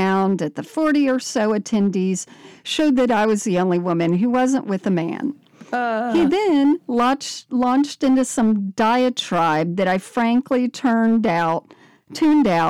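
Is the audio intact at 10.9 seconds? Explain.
No, it isn't. At 10.9 seconds you're hearing hard clipping, which runs through the whole clip rather than arriving at that moment. The speech was driven roughly 7 dB past what the stage could pass, so the peaks get sliced flat. That's a small but steady share of samples, enough that louder syllables carry a gritty, fizzy edge, because those squared-off tops throw harmonics high up the spectrum.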